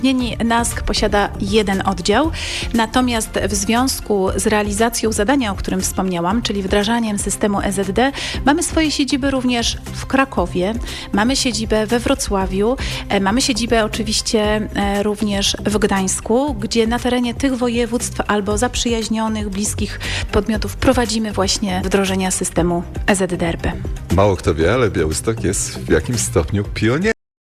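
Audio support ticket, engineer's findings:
Cut-off end at 27.12 s: sound stops mid-event, drops straight to digital silence, no decay tail. Final buffers never written or played, unlike a fade-out or natural stop.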